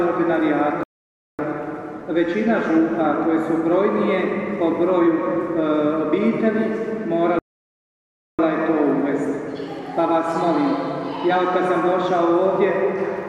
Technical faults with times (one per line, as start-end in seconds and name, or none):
0.83-1.39 rebuffering stall
7.39-8.39 rebuffering stall